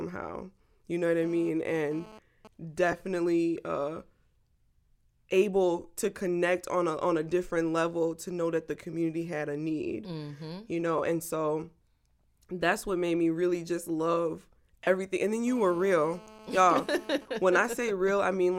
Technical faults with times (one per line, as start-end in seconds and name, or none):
1.22-2.48 GSM phone buzz
2.92 lost LE Audio frames
10.98 lost LE Audio frames
14.84-14.87 lost LE Audio frames
15.47-17.18 GSM phone buzz
17.22-18.48 GSM signalling bursts